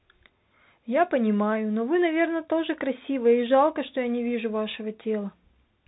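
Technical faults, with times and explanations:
Throughout, Bluetooth CVSD headset codec: the speech is plainly narrowband and grainy, fitting a 64 kbit/s one-bit delta stream whose adaptive step lags loud, fast movements. The spectrogram shows a hard ceiling near 4 kHz over a speckled noise floor, and s sounds smear into scratchy bursts.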